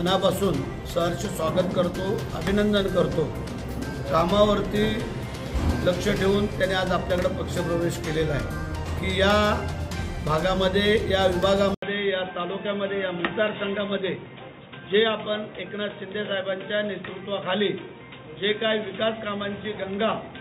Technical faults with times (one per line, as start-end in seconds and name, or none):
11.74-20.40 input switched to a poorer device